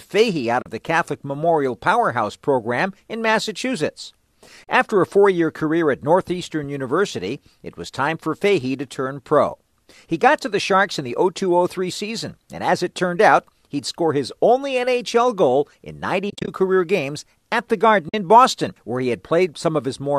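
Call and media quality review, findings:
AAC frame loss with muting: soft-edged silent holes at 0.62–0.66 s, 4.64–4.68 s, 16.30–16.48 s (several short gaps, longest about 30 ms, between "goal in" and "career games at the") and 18.09–18.14 s. The decoder zeroes missing frames and the window overlap fades sound out and back in, unlike a hard dropout. Gap lengths fit roughly 10 ms frames, likely low-delay AAC at 64 kbps.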